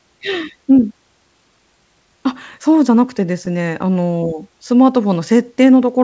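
From 3.18 to 4.28 s, scattered short gaps: about seven lost packets, each patched by stretching the last sound, leave brief ticks, not silent dropouts. Then, from 4.76 to 5.65 s, a jitter buffer slow-down repeats pitch periods, running speech at 94% speed with pitch unchanged, unlike a tape-style slowdown.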